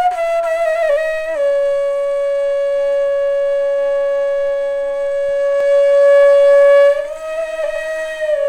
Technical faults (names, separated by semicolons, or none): doubled audio track